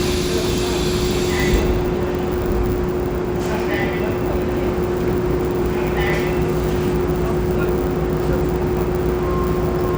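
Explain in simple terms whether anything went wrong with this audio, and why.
A buzz runs through the whole clip: it's a filter restarted on every block, ticking 100 times a second and getting louder when the sound does.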